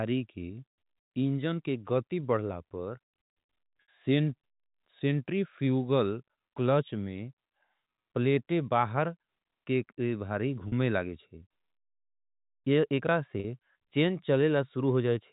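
At 3.82 s, 10.68 s (after "के भारी") and 13.4 s (after "एकरा से"), there's packet loss with pitch repetition. Gaps of 60, 40 and 40 ms get patched by looping the last pitch period, so you hear a brief held, buzzy tone. It sits over the narrowband G.711 telephone sound.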